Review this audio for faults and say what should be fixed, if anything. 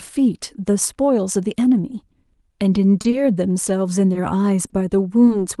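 The speech holds briefly in four short stalls from a late packet, at 3.01–3.21 s, 3.10–3.14 s, 4.13–4.17 s and 4.67–4.79 s. Each time the jitter buffer ran dry, and the last sound was stretched to fill 20–30 ms, with a slight buzz or dip, until the packet arrived. Unlike packet loss, nothing is skipped, because playback resumes exactly where it left off. A jitter buffer with a somewhat deeper minimum target would absorb these 20–30 ms delay swings before it runs empty.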